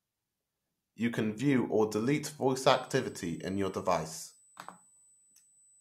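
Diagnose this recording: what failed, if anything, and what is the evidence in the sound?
USB whine enters at the analogue wiring stage, through shared power or ground with the USB interface. From 2.67 s to the end of the speech, a fixed-pitch whine sits at 8 kHz, roughly 30 dB below the signal. The pitch matches the 125 microsecond microframe rate of a high-speed USB bus. Each burst of bus current modulates the supply or ground reference, and that ripple leaks into the audio path as a constant tone.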